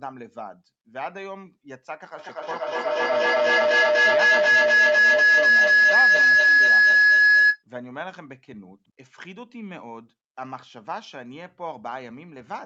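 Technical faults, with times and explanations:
2.19 to 7.64 s, feedback howl: two devices in the same room fed the call's loudspeaker output back into the microphone, and each trip round that loop came back louder than the last. Instead of dying away, the repeats narrowed onto a piercing tone around 1.5 kHz that climbs to about 17 dB above the speech, pulsing roughly five times a second with the loop's delay, before cutting off at 7.64 s.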